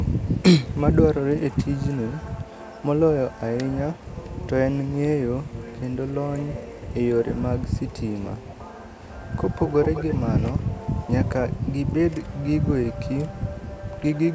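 From 3.96 to 4.42 s, a faint delayed copy of the speech trails the original by about 227 ms. It sits far below the voice, about 35 dB down. From 7.61 to 10.16 s it returns, stronger and longer, about 203 ms behind. Here it is only somewhat quieter than the speech, about 15 dB down. This is likely echo leak: a far-end loudspeaker fed a microphone, and its echo canceller let that pickup through.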